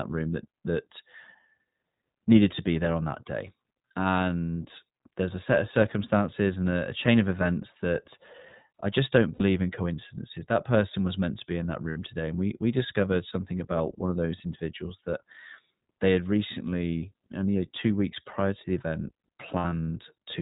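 Speech running through the iLBC codec for its whole length. Nothing above 4 kHz survives, and the voice has a plainly audible rough, slightly synthetic grain. The dullness and the 20 ms-scale texture point to the 20 ms iLBC mode at about 15.2 kbps. Plain low-pass filtering would sound muffled but smooth. This roughness comes from the codec rebuilding the excitation frame by frame, and it sets iLBC apart from a clean band limit.

Lost iLBC frames occur three times. After "I just don't" at 9.34 s, a 60 ms gap is bridged by a held, faintly buzzy vowel before "in coincidences". After "to be in that" at 11.90 s, another 60 ms gap sounds the same before "today and we we". After "prior to the event", losses totalling about 120 ms are scattered from 19.58 to 19.86 s, and the longest run is around 70 ms. The decoder repeats the last pitch cycle with added noise, so each gap is filled with sound rather than silence or a click, unlike a dropout. 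Each iLBC frame decodes without relying on the previous one, so the voice returns cleanly at once. Codecs that carry state from frame to frame smear the damage onward instead.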